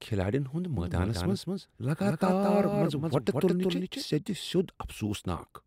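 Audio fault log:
0.77 to 4.03 s, doubled audio track: the speech turns smeared and stuttery, as if a second copy were chasing the first. The trailing copy sits about a fifth of a second behind and somewhat quieter, perhaps around 5 dB down, with full bandwidth and no reverberant tail or room colour. It cuts in and out abruptly at both ends. This most likely comes from the signal being captured twice, once through a slower path.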